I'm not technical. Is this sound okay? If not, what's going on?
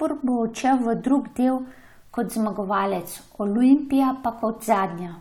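Yes, nothing wrong can be heard in this recording.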